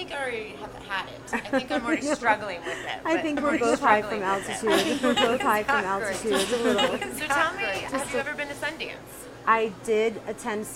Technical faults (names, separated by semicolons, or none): doubled audio track